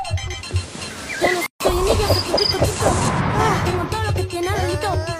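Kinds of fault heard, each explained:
Gap at a join of encoded pieces: at 1.46 to 1.60 s, a gap of about 141 ms cuts into continuous sound with smeared edges, then the sound resumes where it stopped. Separately encoded pieces, joining about every 4.0 s, were spliced with their encoder delay and end padding left in.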